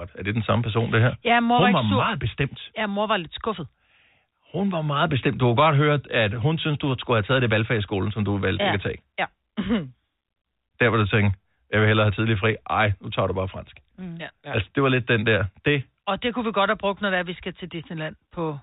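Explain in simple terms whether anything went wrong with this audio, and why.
Nothing went wrong with this audio, so there is no fault here to explain.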